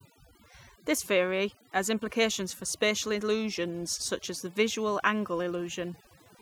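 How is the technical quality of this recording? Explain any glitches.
Quality is poor because of one fault present throughout the speech: overdone noise removal. The noise reduction was set too aggressively, pushing individual frequency bands near its noise estimate down to nothing and taking quiet parts of the voice with them. The background drops and breaks up into twinkling specks.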